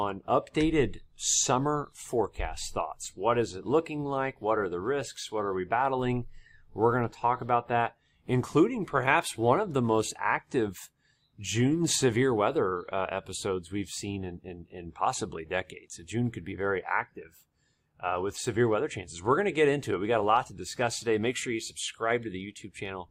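No technical faults can be heard in this audio.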